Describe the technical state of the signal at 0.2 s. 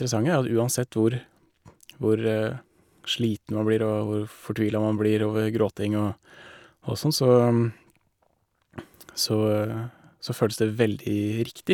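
At 0.2 s the speech signal is intact, with no dropout, clipping, distortion or other fault audible at that point.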